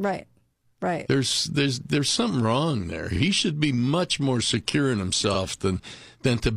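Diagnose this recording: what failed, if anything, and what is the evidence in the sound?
Repeated frames, a codec or storage fault: at 3.12 s and 5.30 s the speech stutters as one 46.4 ms block plays twice, which fits a single compressed frame written or sent again. A spectrogram shows identical adjacent slices, each adding 46.4 ms.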